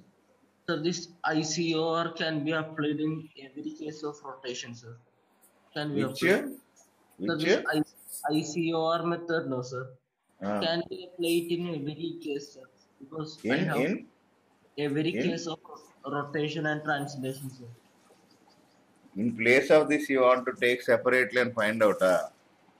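No technical faults can be heard anywhere in the audio.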